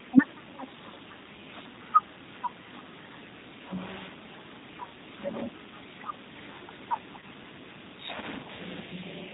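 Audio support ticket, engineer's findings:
G.729 codec, throughout. Speech band-limited, nothing above 4 kHz; plainly audible roughness and synthetic texture. Consistent with G.729A at 8 kbit/s: decoder rebuilds each 10 ms frame from a vocal tract filter, pitch predictor and a few pulses, discarding fine detail.

VoIP packet loss concealed by the speech codec, 7.19–7.24 s. Brief stretched, fading patch replacing about 30 ms of speech, fitting one lost packet. Decoder extrapolated last pitch and filter with falling gain; voice stays weak or distorted just after, as frames rebuild from the patched state.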